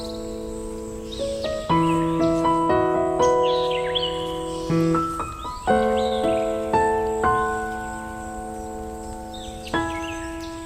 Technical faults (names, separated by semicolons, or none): short stall from a late packet